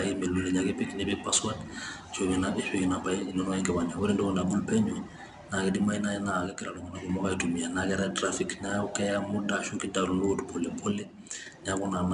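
4-bit ADPCM compression runs through the whole speech recording. Each sample is coded as a coarse 4-bit step away from a predicted value, with the step size adapting as the signal moves. That rounding leaves a broadband, level-following noise that is plainly audible as gritty hiss on louder syllables, with roughness on sharp onsets. Nothing reaches above about 10.6 kHz, which points to a sample rate near 22 kHz and gives the speech a dull top.

One channel drops out from 6.47 to 7.09 s, and again from 10.92 to 11.46 s. During each stretch the overall level falls abruptly by about 6 dB and then recovers. That drop is what happens when a stereo signal is summed to mono and one side goes silent, so the likely cause is a brief loss of one channel. The material shared by both sides is left at half strength.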